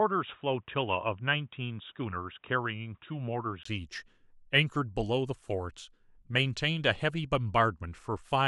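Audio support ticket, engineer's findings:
0.0 to 3.65 s: sound dull and boxy, nothing above 3.8 kHz, faint extra hiss well down, roughly 50 dB under the signal. Short gap of about 20 ms at 3.65 s, then full band returns, same loudness. Likely an input switched to a poorer device, e.g. a headset call profile, then back. Narrow pickup path explains the top-end cutoff.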